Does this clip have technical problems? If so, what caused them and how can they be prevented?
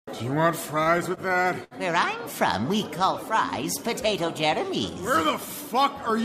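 Yes, there are repeated stalls (stutter) from 0.83 to 1.74 s: seven short gaps, the longest 69 ms, where the jitter buffer ran dry and the last sound was stretched out, making it drag. A bigger or adaptive jitter buffer on a steadier connection would prevent it.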